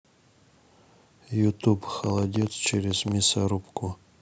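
Between 2.04 and 3.13 s, something, likely interference from nearby equipment or a faulty connection, injects a train of clicks into the speech: roughly ten similar pulses at 10.2 per second, unevenly spaced, peaking around 5 dB above the speech, heard as irregular ticking.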